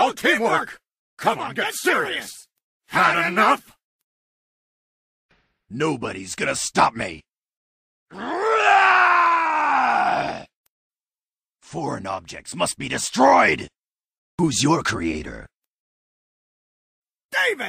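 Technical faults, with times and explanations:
No technical faults can be heard in this clip.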